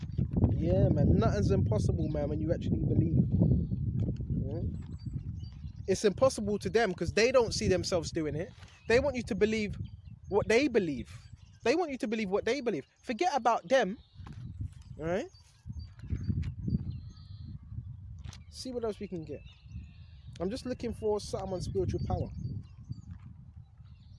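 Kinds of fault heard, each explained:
Nothing to flag here; the audio runs along without any technical faults turning up.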